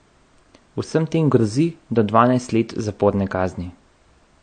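Throughout the speech the top end stops dead at 9.1 kHz, and the remaining sound has a plainly audible watery, swirling quality. This is likely MP3 compression at a bitrate that fits roughly 48 kbps, where the encoder cuts the treble and drops weak frequency detail.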